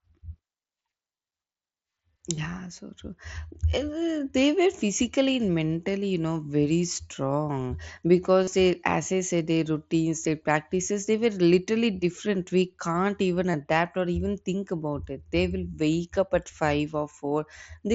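At 2.36 s, just before "so true", and at 13.52 s, between "can't even" and "or even think about", the speech smears for about 15 ms, almost unnoticeable. From 8.43 to 8.48 s, right before "they as I said", a 37.5 ms gap turns into a short buzzy held tone with a slight warble as real audio returns. This is concealed Bluetooth headset packet loss: packets on the wideband mSBC link went missing, and the receiver filled each gap by repeating the best-matching recent stretch of waveform.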